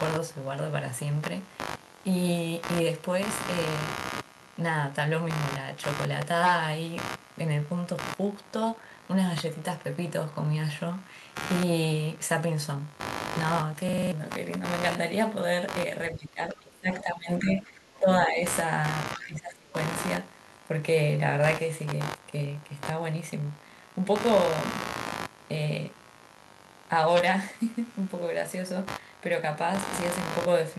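A speech recording with computer activity noise running throughout: a buzzy, scratchy pulsing at around 70 Hz, roughly 10 dB below the speech, rising and falling independently of the talker as processor or peripheral load shifts the shared ground. At 13.89 to 14.12 s a system hang loop occurs: a 46.44 ms fragment repeats about five times, a 21.5 Hz machine-gun stutter, which fits a 2048-sample ring buffer cycling while the driver stalled, and about a fifth of a second of audio is lost. From 16.1 to 18.43 s and again from 19.15 to 19.75 s the speech dips and breaks up, by roughly 20 dB in the first stretch and 25 dB in the second. The likely cause is speech suppressed in double talk, with the echo canceller attenuating the near talker while the far end was also speaking. Inside the first stretch, at 17.47 to 17.62 s, a brief fragment of a second voice sits roughly 15 dB under the speech, probably the other side's voice leaking through from the loudspeaker as residual echo the canceller did not remove.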